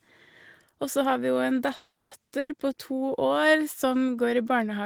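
From 1.75 to 2.13 s, a call audio freeze stretches the last sound into a fading buzz or hiss, then about 150 ms of silence, likely from delayed packets; the spectrogram shows smeared, decaying bands before a blank gap.

At 2.39 to 2.51 s, a burst of packet loss drops about 100 ms; the held sound fades, and the waveform resumes abruptly further on.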